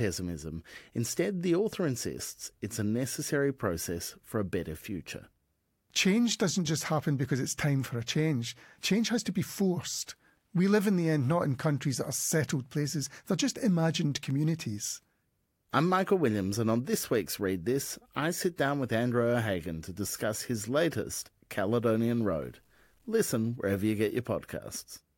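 Speech, with low bit depth without dither from 21.64 to 23.14 s, between "to discuss his latest" and "wherever you get": grainy, signal-following distortion, likely from truncation to 10 bits, with error roughly 45 dB down.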